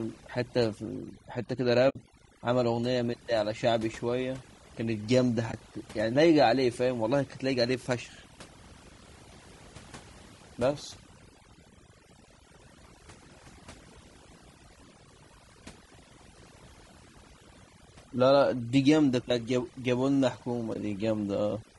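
Overdone noise removal runs through the whole speech clip. The suppressor is set so hard that any frequency band sitting near its noise estimate is pulled far down or switched off. Between phrases the background collapses to near silence scattered with twinkling specks, and the quieter parts of the voice are cut away along with the noise.

Also present from start to finish is a rough, grainy texture, with a hiss that fills the gaps between pitch harmonics and a top band that sounds lowered and synthetic. This is likely low-delay AAC compression, the AAC-ELD format used in video calls, and the damage is plainly audible. Its short frames resolve harmonics poorly and use up bits, and the graininess fits a low bitrate of around 32 kbps.

AAC frame loss with muting opens a soft-edged hole at 1.89–1.96 s and brief dips at 5.51–5.54 s and 20.73–20.76 s. In each gap the decoder replaced the lost spectrum with zeros. 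The overlapping windows then fade the sound out and back in. The first hole is the longest, about 60 ms of missing audio, which fits three lost frames. The other two each fit a single lost frame of about 20 ms.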